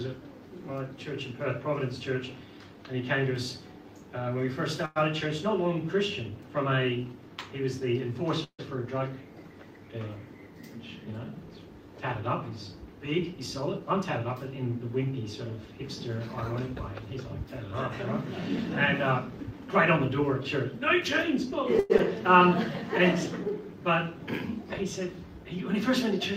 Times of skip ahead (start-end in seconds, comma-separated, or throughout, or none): 21.98-22.01